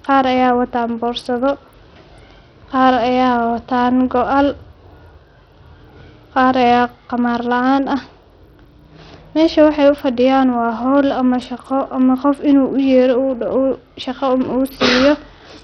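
Bluetooth SBC compression, likely the cause of what is heard throughout the speech, leaves nothing above 16.8 kHz, with treble flickering and a gritty, aliased haze riding on the voice. The heavy damage fits a starved bit pool around 64 kbps, where upper sub-bands lose their bits and the rest are coarsely quantised.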